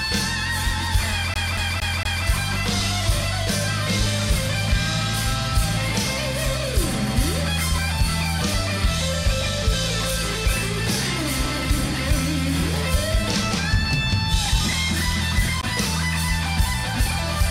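From 1.34 to 2.26 s the audio is caught in a CD stuck on one turn: the same slice of about 0.23 s plays four times in a row, each pass cut off by a brief mute where the laser jumps back a track at a scratch. What separates this from a digital buffer loop or a stutter edit is the even rhythm tied to disc rotation and the tiny silent gap at every jump before playback carries on.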